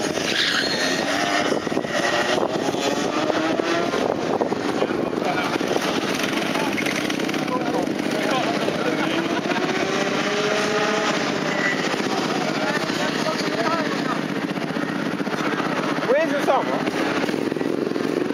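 Nothing stood out as a technical fault on listening to the clip.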